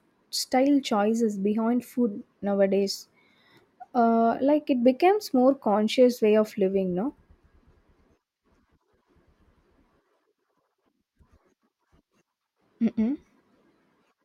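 No technical faults can be heard in this speech recording, so there are none to describe in time order.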